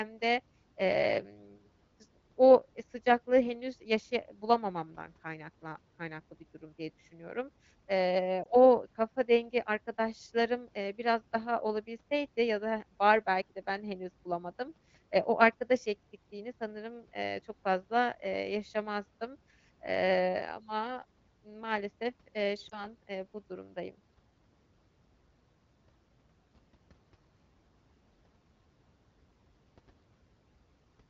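Speech carried over AMR wideband (HD Voice), clear in a way that fits a rate around 12.65 kbit/s. It has two lost AMR speech frames. At 8.44 to 8.47 s, just before "o kafa dengi arkadaşlarım", there is a brief dip. At 22.69 to 22.87 s, between "maalesef eee" and "eee bu durumdayım", there is a brief dip or warble. Each points to one corrupted frame, which the decoder concealed by repeating earlier settings at falling gain.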